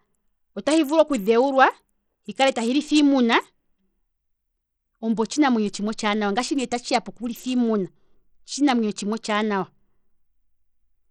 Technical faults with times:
0.00-11.10 Bluetooth SBC compression

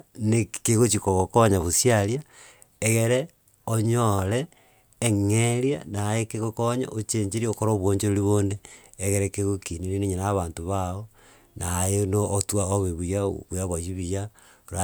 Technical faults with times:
none

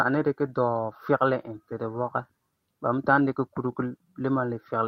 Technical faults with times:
none

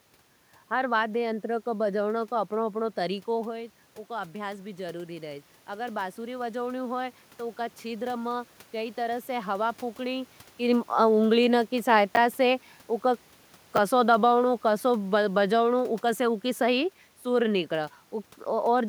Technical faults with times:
12.15 chunks out of order
13.76 chunks out of order

